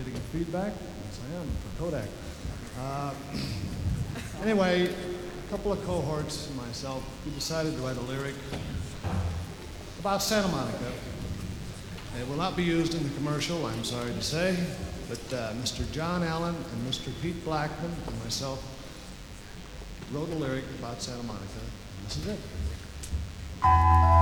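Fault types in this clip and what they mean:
DECT cordless phone buzz: a nearby DECT handset or base transmits a short radio burst every 10 ms, and the audio circuitry rectifies it, so a steady, thin buzz at 100 Hz with a dense series of harmonics runs through the whole clip, sitting roughly 20 dB below the sound.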